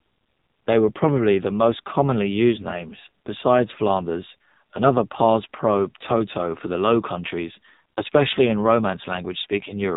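From start to end, the speech carries the AMR narrowband mobile codec sound. Nothing above 4 kHz survives, and heavy coding damage makes the voice buzzy and synthetic, which fits a low AMR-NB mode near 5.9 kbps, where few pulses model each frame.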